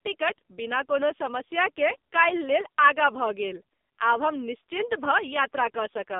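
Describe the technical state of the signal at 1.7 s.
At 1.7 s the speech sounds buzzy and synthetic, with nothing above 3.8 kHz and only a 200 Hz to 3.7 kHz band. This is the AMR narrowband mobile codec throughout, its heavy damage pointing to a low mode near 5.9 kbps.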